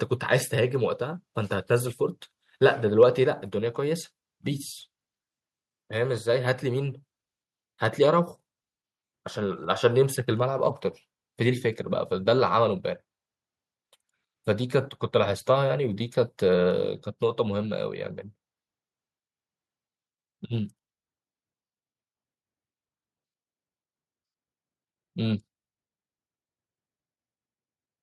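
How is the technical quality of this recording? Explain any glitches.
Two glitches, close together, early in the speech. At 3.02 to 3.04 s there's a brief harsh crackle, most likely microphone overload: the input ran about 1 dB past the converter's limit, flattening a small share of the peaks. Then at 3.24 s the level drops suddenly by about 5 dB, voice and background together, likely the microphone volume being stepped down by the call software reacting to that clipped peak.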